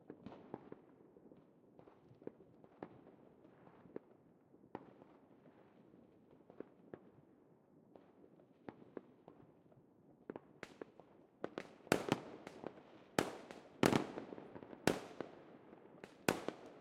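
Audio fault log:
No fault was found in the audio.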